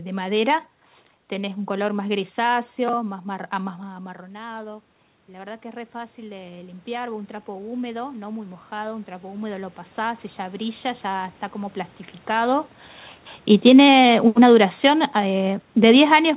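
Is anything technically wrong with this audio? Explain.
Yes. From 3.05 s to 11.84 s the voice and the room noise swell together, slowly, by about 15 dB. This is automatic gain rising: after the talker moved back from the microphone around 3.5 s, the input fell by about 16 dB, and the gain control crept upward to compensate. It does so again from 13.92 s to 14.37 s, by about 4 dB.

From 13.52 s to the end, the sound starts loud and then sinks together with its background. This is automatic gain falling: the talker moved at the microphone around 12.5 s; the gain control found the input too loud, or its background noise too strong, and gradually pulled its gain down, with a brief upward correction inside that stretch. Throughout, nothing reaches above 4 kHz, which fits a G.711 call codec at 64 kbps.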